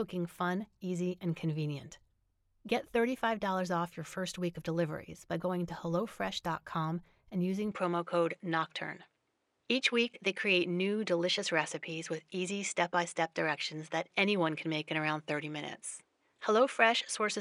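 At 7.72 s the speech abruptly loses everything above 10.5 kHz and takes on a different tone and a faint new background noise, with no gap and roughly no level change. This is likely an input switched to a poorer device. The added noise sets it apart from a simple filter.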